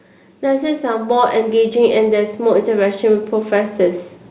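From 0.49 s to 3.83 s, automatic gain rising lifts the speech and background together by about 7 dB. The level swells steadily as the control chases a quiet input.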